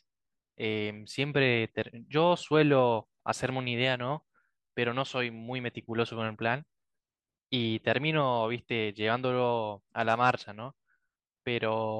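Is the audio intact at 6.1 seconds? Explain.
Yes, the speech at 6.1 seconds is intact, with no audible fault at that point.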